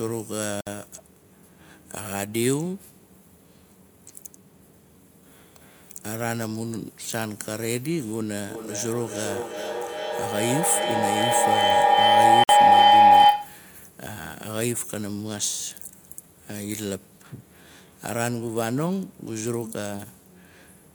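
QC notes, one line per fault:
0.61–0.67 s and 12.44–12.49 s, Bluetooth stall: the audio drops to silence for 58 ms and 53 ms, then resumes where it left off. The likely cause is a wireless link delay that starved the headphones' buffer until retransmitted packets arrived.
8.48–13.71 s, feedback howl: a tone around 700 Hz builds rather than decays, pulsing roughly every 400 ms and peaking about 13 dB above the speech. Sound is recirculating between microphone and loudspeaker with more than unity loop gain until the loop breaks.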